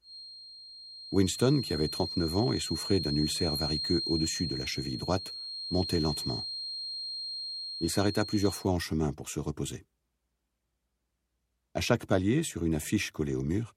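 A loudspeaker feeding back into the microphone, likely held just at the edge of instability, leaves a feedback whistle on this audio from the start to 8.70 s. The loop gain sits close enough to unity that a single frequency near 4.2 kHz keeps ringing without building into a howl. It comes through as a thin, steady tone about 10 dB under the main sound, swelling and fading slowly in level, and then it stops.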